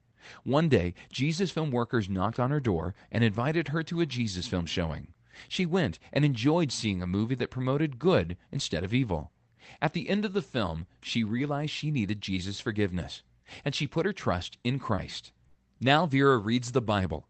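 At 14.95 s, just after "put her trust in", there is a short concealed packet loss lasting to 14.99 s. About 20 ms of the stream arrived too late for the decoder. The receiver covered the hole by carrying the last sound forward for about 20 ms, then blended back into real audio. It is heard as a quick smear or wobble. The part that never arrived is simply gone.

From 15.47 to 15.57 s comes a burst of packet loss. Around 80 ms in a row was lost. The decoder extended the preceding sound for about 75 ms, lowering its level as the gap continued. The result is a brief held buzz or fading hiss. Then the sound picks up further along, with the section in between missing. The band-limited character of the call path, which tops out near 8 kHz, continues through both events.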